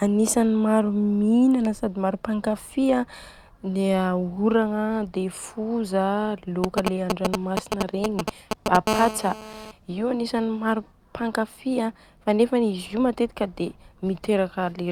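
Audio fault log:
6.64–8.77 s: GSM signalling bursts, starting just after "dia foza". A nearby 2G phone is sending short groups of radio bursts, and the audio circuitry rectifies them. The result is a galloping dit-dit-dit of brief 217 Hz buzzes, roughly as loud as the speech.
8.87–9.71 s: GSM phone buzz. The phone has moved to a call and is now transmitting continuously in bursts 217 times a second, which the circuitry rectifies into a steady, hard, raspy 217 Hz buzz rich in harmonics. It sits about 6 dB below the speech and has no relation to it.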